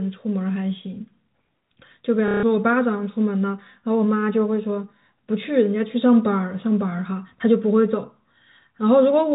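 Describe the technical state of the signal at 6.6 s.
At 6.6 s the speech comes through intact, carried in the ordinary G.711 A-law telephone band with nothing above 4 kHz and no fault at that moment.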